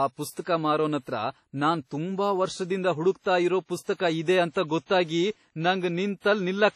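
The speech is heavily damaged by a transform codec from start to finish, likely WMA compression. Nothing is heard above 14.8 kHz. Quantisation noise is smeared across long blocks, so it sounds washy and ringing, with hiss that breathes with the speech. The damage fits a low bitrate of around 32 kbps.

From 0.31 to 0.37 s there is pre-echo. A sharp attack fell late in a codec block, and noise meant for the loud part spread into the quiet 57 ms before it. A brief hiss leads the attack, which sounds softened and smeared.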